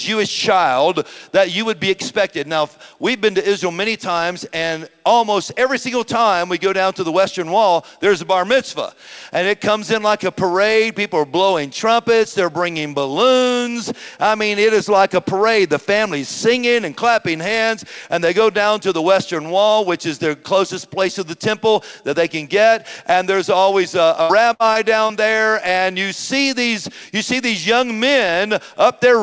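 From 24.22 to 25.11 s, the sound turns choppy and robotic. This is repeated packet loss. Audio went missing again and again, the longest hole about 75 ms. Each hole was patched by stretching the last sound, roughly a fifth of that stretch. The call audio stops at 8 kHz, consistent with G.722.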